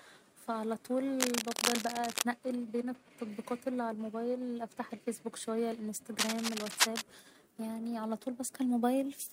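From 1.20 to 2.22 s, and again from 6.19 to 7.02 s, cable scratch noise runs over the speech: dense, irregular bursts of scratching and rustling, roughly as loud as the speech. The likely cause is a worn cable or connector being moved, its contact resistance jumping about rapidly. Unlike steady hiss it comes and goes in uneven clusters, and unlike isolated clicks or crackle it forms a continuous rough texture lasting close to a second each time.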